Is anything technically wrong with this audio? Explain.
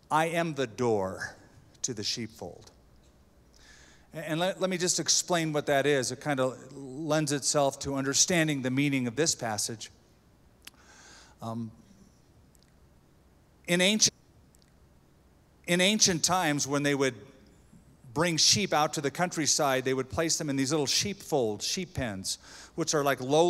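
Yes, there's one clear fault. At 14.07 s the stream segment is repeated: roughly two seconds of audio, running to 16.07 s, plays a second time. What's happened is the player fetched or queued the same chunk twice, so it jumps back and replays it, stretching the clip by about 2.0 s. You'll catch a small blip at the jump back, followed by that stretch of sound you've just heard coming round again.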